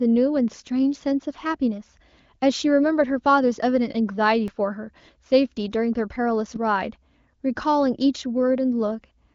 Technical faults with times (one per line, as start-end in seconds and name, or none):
4.48 underrun with held sample